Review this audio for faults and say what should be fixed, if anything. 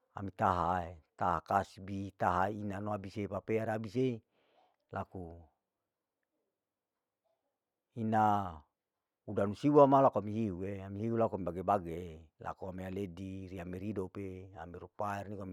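Nothing needs fixing; no faults can be heard.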